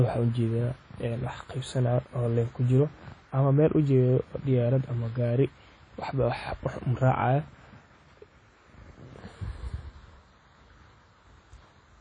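Throughout the speech, a washy, ringing texture with hiss that breathes alongside the voice points to WMA compression, likely at a low bitrate around 32 kbps. Nothing remains above 10.1 kHz. Unlike a simple low-pass filter, the plainly audible smearing across tens of milliseconds marks a transform codec's long blocks.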